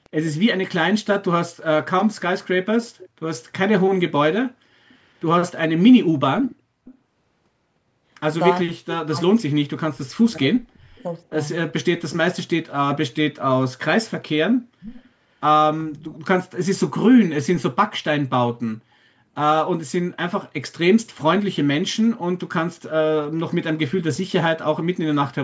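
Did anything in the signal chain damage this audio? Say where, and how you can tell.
Yes, in the call processing stage. Faint delayed copies of the speech appear at 0.04–0.31 s, 2.9–3.09 s, 6.44–6.98 s, 8.92–8.96 s and 14.8–15.1 s, each trailing its source by a constant 378 ms and sitting roughly 15 to 25 dB below it. This is echo leak, likely from a far-end loudspeaker echo canceller that let part of its microphone pickup return. Room reverberation would smear continuously after every sound, not repeat as a separate copy at one fixed delay.

From 8.63 to 11.39 s the speech repeatedly dips, by as much as about 40 dB at the deepest point, for around two seconds in total. This is speech suppressed in double talk, likely caused by the echo canceller attenuating everything while both sides were talking. A short echo burst at 8.92 s falls inside this window, which supports that cause. Network packet loss would produce abrupt, evenly short gaps, whereas these drops follow the overlap in talk and come and go across several seconds.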